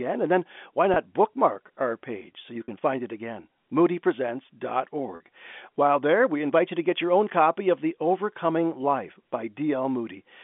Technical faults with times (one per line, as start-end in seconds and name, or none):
0.94-0.96 packet loss with pitch repetition
2.64-2.68 packet loss with pitch repetition
5.16-5.20 packet loss with pitch repetition